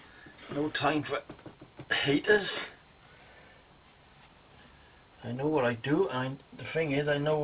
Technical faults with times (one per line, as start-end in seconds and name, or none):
none